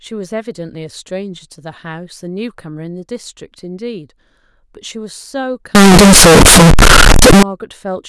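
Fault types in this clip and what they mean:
Float read as integer: 32-bit floating-point speech samples were likely read back as 32-bit integers, so each value is set by its sign and exponent bits rather than by its real level. From 5.75 to 7.43 s the waveform becomes nearly square at an almost fixed, high level, whatever the original loudness. The result is a very loud, harsh stretch where background noise is as loud as the speech, though pitch can still be followed.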